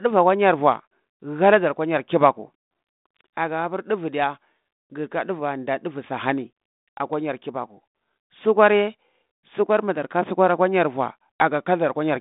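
Nothing goes wrong anywhere in this speech clip; it simply carries the narrow sound of a 32 kbit/s G.726 phone line, with nothing getting through above about 3.8 kHz.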